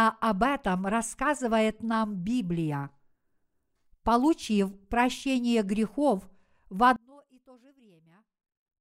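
From about 6.96 s, just after "прощение грехов в", the speech collapses to a faint trace, about 30 dB down, and stays that way to the end of the clip. The centred voice and its low end all but disappear, leaving only what differs between the two channels. The likely cause is one channel inverted: with one side's polarity reversed, the material common to both cancels when they are summed to mono.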